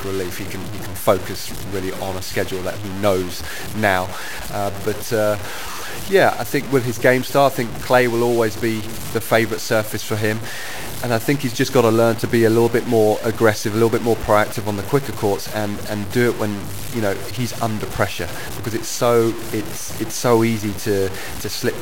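Throughout, the speech sounds grainy and gritty, with quiet passages dropping out or sputtering. The likely cause is low bit depth without dither: about 5 bits, truncated, leaving distortion roughly 15 dB below the signal.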